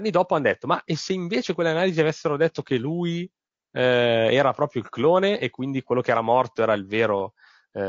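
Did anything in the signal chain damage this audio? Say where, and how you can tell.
Yes, at the codec stage, and throughout the speech rather than at any one moment. The voice is rough and grainy, with noise filling the gaps between pitch harmonics and a thin, synthetic-sounding top band. This is likely low-delay AAC compression (AAC-ELD). Its short frames resolve harmonics coarsely and spend bits inefficiently, and the degree of damage fits a bitrate around 32 kbps. The damage is steady, with no dropouts or glitches, which rules out network loss.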